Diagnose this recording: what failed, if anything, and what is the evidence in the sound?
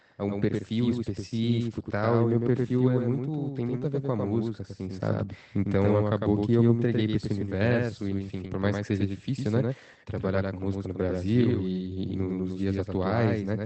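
A doubled audio track runs through the whole recording. Every onset is followed roughly a tenth of a second later by a full-band copy about 5 dB quieter, with no decay or room colour, so it reads as a slapback echo rather than a room. On a spectrogram each syllable's pattern repeats as a fainter shifted twin. On the waveform each attack has a second, smaller attack trailing it. The likely cause is at capture or in editing: the same signal recorded again through a slower path, or two out-of-step copies left in the mix.

At the network and codec stage there are seven lost packets rebuilt from error correction, in four stretches at 2.77–2.79 s, 3.73–3.83 s, 7.47–7.49 s and 8.43–8.49 s. These cover 20, 60, 20 and 40 ms. Each lost Opus frame was replaced by the low-bitrate copy carried in the following packet, so there is no gap. Those stretches sound briefly rougher and noisier than the surrounding 24 kbps audio, whose band stops near 8 kHz. 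On a spectrogram they show as short smeared, grainier patches with less harmonic detail. The waveform stays continuous through them.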